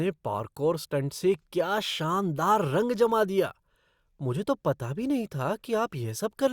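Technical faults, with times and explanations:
No technical faults can be heard in this speech.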